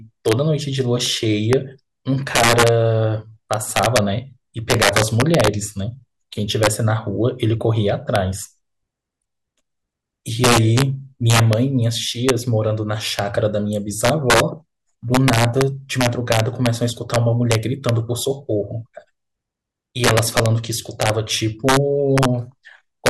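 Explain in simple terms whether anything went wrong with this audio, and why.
Something did go wrong: integer overflow runs through the whole speech clip. The loudest peaks push the level past what the numbers can hold, so instead of being capped they flip to the opposite extreme. A small fraction of moments crack harshly, much sharper than ordinary clipping.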